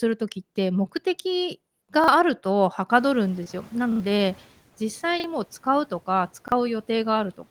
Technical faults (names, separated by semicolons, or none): repeated buffer; noise suppressor catching up; short concealed packet loss